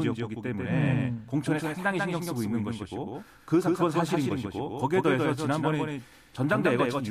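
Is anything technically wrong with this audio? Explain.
Yes, there's a doubled audio track running through the whole speech clip. A second full-band copy trails about 150 ms behind, roughly 5 dB quieter, with no decay or room colour. It's likely captured twice through a slower path, giving a flat, slapback echo.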